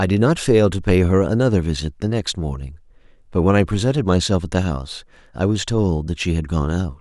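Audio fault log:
No faults detected in this speech recording.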